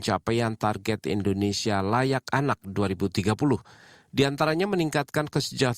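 From start to finish, the resampler restarted on every block: each 10 ms block was converted from 48 kHz to 44.1 kHz in isolation, leaving edge errors heard as a 100 Hz buzz under the speech.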